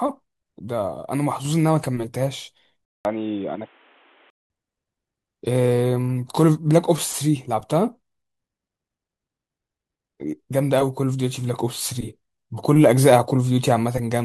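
At 2.85 s a 200 ms gap opens, and until 4.50 s the speech turns dull, with nothing above 3.8 kHz and a faint new background noise, while loudness holds steady. That gap and the changed noise mark a likely input switched to a poorer device, not mere filtering.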